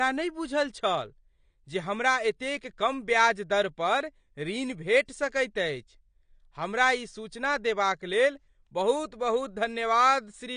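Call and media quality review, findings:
AAC compression, throughout. Speech dull and smeared, with a warbling, fizzy texture on sibilants and held vowels, plainly audible. Nothing above 9.7 kHz. Spectrogram: hard horizontal ceiling at 9.7 kHz, patchy holes and blotchy noise-filled bands below it. Likely component: AAC-LC encoder at a low bitrate, which fits about 32 kbps. Mechanism: frame-wise quantisation against a hearing model starves upper bands, so the encoder drops the top band and coarsely codes the rest.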